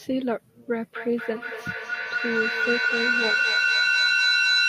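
Feedback echo between two devices starts at 0.96 s and runs to the end of the speech. Two devices on the same call sit in one room, so one device's loudspeaker plays back what the other's microphone sent, and that microphone captures it again. Neither echo canceller removes sound played by the other device, so each word returns roughly every 200 ms, thinner and more ringing. The loop is loud enough that the repeats pile up, peaking about 4 dB above the speech itself.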